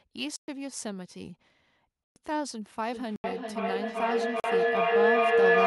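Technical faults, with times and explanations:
0.36–0.48 s, 2.04–2.16 s, 3.16–3.24 s, 4.40–4.44 s: block of digital silence. Gaps of 120, 120, 80 and 40 ms drop to silence, cutting out and back with no fade, unlike concealment, which fills gaps.
2.92 s to end: feedback howl. A loop between two devices in the room keeps regaining level, building to a tone near 500 Hz, about 10 dB above the speech, that pulses roughly every 0.4 s and never settles like steady hum.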